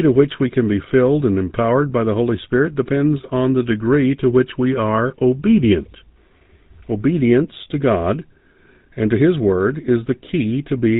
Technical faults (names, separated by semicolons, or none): GSM full-rate codec